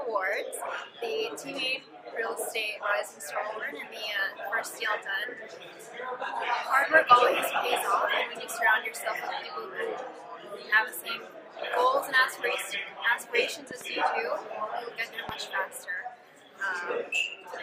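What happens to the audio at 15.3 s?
A single loud pop lands from 15.29 to 15.31 s, peaking roughly 10 dB above the surrounding audio, with the sound continuing beneath it. It is likely an electrical transient, such as a plug, switch or static discharge, injecting a voltage pulse that the downstream circuitry shapes into a brief thump. On the waveform it appears as one tall, narrow spike; on a spectrogram, as a thin vertical stripe spanning the full frequency range.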